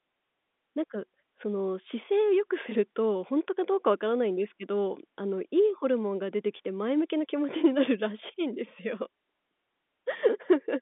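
No technical faults can be heard anywhere in this speech recording, which comes through an ordinary telephone line.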